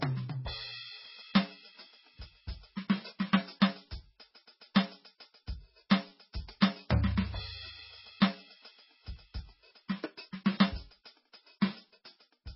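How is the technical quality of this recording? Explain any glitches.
The quality is poor throughout this music. Nothing is audible above 5.6 kHz, so the treble is gone. The sound is watery and swirly, with metallic chirps and smeared attacks. This is likely heavy MP3 compression. Short of bits, the encoder cut the top band and switched weak frequency lines on and off between frames. The damage fits a bitrate near 16 kbps.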